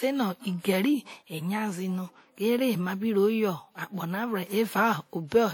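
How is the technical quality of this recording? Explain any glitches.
The recording has plainly audible codec damage from start to finish. Lossy transform coding, likely WMA compression at a rate that fits about 48 kbps, smears quantisation noise across tens of milliseconds around each sound. The speech rings and turns washy, with hiss that breathes alongside it.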